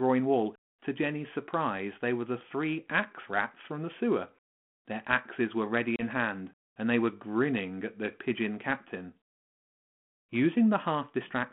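At 5.96 s the speech drops into a hard-edged silent gap of about 30 ms, ending by 6.02 s. This is packet loss on an ADPCM call, with a few packets missing, which fits a G.726 link running at 32 kbit/s and band-limited to 150 Hz to 3.4 kHz. Because ADPCM sends only differences from a running prediction, the receiver's predictor and step size lose track during the gap. When sound resumes it comes back with some distortion for a few tens of milliseconds until the decoder realigns.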